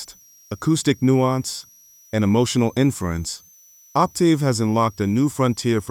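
From start to finish, a switching supply whistle sits under the sound. A switching power supply is running in an audible burst mode or beating with another one. It gives a thin high whistle. Its pitch wanders between about 5.7 and 6.2 kHz, roughly 30 dB below the main signal.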